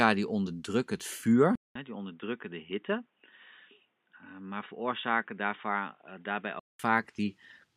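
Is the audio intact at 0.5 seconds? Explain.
Yes, at 0.5 seconds the speech plays through cleanly, with no dropout, click, distortion or other fault at that point.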